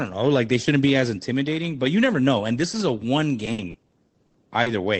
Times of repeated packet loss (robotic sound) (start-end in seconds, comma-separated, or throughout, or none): 3.45-4.68